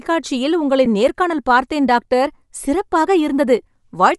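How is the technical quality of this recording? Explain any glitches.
The technical quality is compromised throughout by plainly audible compression, with one brief dropout.

Throughout the speech, a transform codec is discarding much of the upper spectrum and filling it with noise, most likely Bluetooth LC3 compression at a low bitrate, consistent with 48 kbps and 7.5 ms frames. The result is a plainly audible breathy, grainy edge.

At 0.85 s, lost LE Audio frames left a 7.5 ms gap, which fits a single dropped frame. The decoder concealed it by reusing the previous spectrum with random signs.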